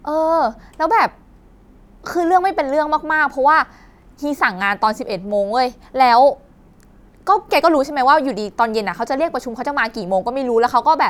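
Nothing stood out as a technical fault on listening to the speech in this recording.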